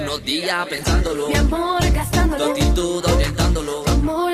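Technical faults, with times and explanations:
0.74–2.51 s, call bitrate drop: the sound turns rough and muffled, its top end dulled, for about 1.7 s before clarity returns. This points to the encoder being squeezed from around 64 kbps to roughly 17 kbps, coding coarsely and discarding high frequencies.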